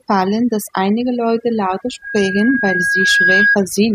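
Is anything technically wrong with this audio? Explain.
Yes, there are two problems.

The whole clip has overdone noise removal. Someone set the noise reducer too aggressively, so any frequency band sitting near its noise estimate gets pulled way down or muted, and the softer parts of the voice get chopped along with the hiss. You can hear it in the background, which drops and breaks up into little twinkly specks.

From 1.08 s to 3.59 s there's a loudspeaker feedback squeal at 1.6 kHz. The mic is hearing the speaker it feeds, and at that one frequency the loop gain tops one, so the tone keeps feeding itself. It swells over about two seconds into a steady whistle that ends up a few dB louder than the speech, roughly 5 dB, before it cuts off.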